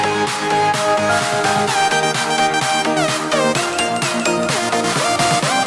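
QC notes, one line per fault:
No faults found in this clip. Nothing in the audio calls for a QC entry.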